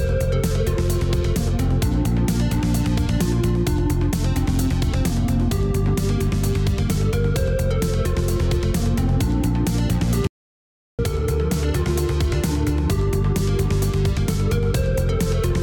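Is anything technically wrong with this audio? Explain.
Yes. From 10.27 to 10.99 s there is an audio dropout to silence lasting about 0.72 s, likely from the input being lost while recording continued. The sound stops mid-flow and returns abruptly, and unlike a natural pause, no room tone or noise floor remains in the gap.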